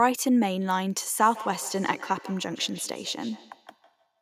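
From 1.18 s right through to the end, there's a feedback echo between two devices: each word comes back roughly every 150 ms, thin and ringing, peaking about 18 dB under the speech. A second device nearby is replaying the call, and this microphone picks it up again.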